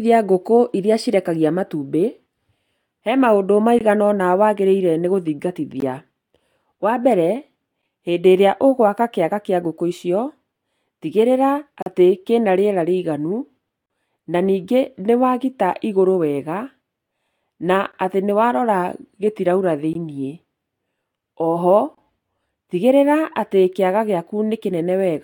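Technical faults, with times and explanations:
3.79, 5.80, 7.82, 11.82–11.86, 13.86–13.90, 17.92, 19.93 and 21.95–21.98 s: gap between stream segments. The speech drops out abruptly, with hard edges, for 11 to 41 ms each time. The holes fall at 2-second segment joins, where timestamps leave a gap that plays as silence.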